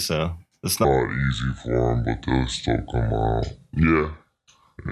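Speech, with a wrong sample rate fault from 0.85 s to the end. From that point the audio plays back at two thirds of its proper speed. Pitch falls by the same ratio, about seven semitones. The speech sounds lower and slower at once. Speed and pitch shift together because the samples are played out at a lower rate than they were recorded at, with no conversion. A 2:3 ratio fits 48 kHz material played at 32 kHz.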